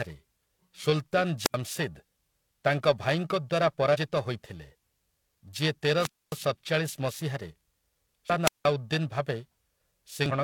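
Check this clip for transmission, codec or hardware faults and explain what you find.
Three kinds of fault appear: periodic clock jitter throughout, wireless microphone squelch dropouts, and damaged data in a compressed stream.

Periodic clock jitter runs the whole length. Interference wobbles the converter clock at around 1 kHz, adding sidebands that give the speech a rough, metallic edge, strongest on high frequencies.

Wireless microphone squelch dropouts occur at 1.42–1.56 s, 5.97–6.39 s and 8.44–8.67 s. The FM signal fades until the receiver mutes, giving a hiss burst, then silence of about 79, 253 and 175 ms.

Damaged data in a compressed stream hits at 3.90–3.96 s, 8.26–8.30 s and 10.26–10.32 s. Corrupt frames force the decoder to resync, producing short squawks or blips.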